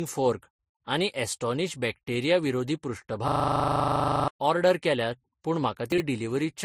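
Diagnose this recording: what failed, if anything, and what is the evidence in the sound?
Codec stage: the speech carries two layers of lossy-coding smear at once, with swirly, watery high frequencies over a duller pre-echo haze, and nothing above 15.4 kHz anywhere. That combination likely comes from transcoding between lossy codecs, consistent with an MP3 at about 46 kbit/s re-encoded to Vorbis at about 38 kbit/s. A single low-bitrate encode would show only one texture of artefacts.

Driver or buffer stage: from 3.28 to 4.28 s one 40 ms slice repeats exactly about 25 times, producing a 25 Hz machine-gun stutter. That is a system hang loop: the host froze while the hardware kept replaying its ring buffer. Roughly a second of speech is lost. A jittery dropout would not repeat identical material.

Storage or buffer stage: between 5.92 and 6.0 s there is a brief jumbled moment. It sounds like chunks out of order, where a 20 ms chunk played three chunks late. 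Nothing is missing, which separates this from a dropout, but the order is wrong across three hard joins.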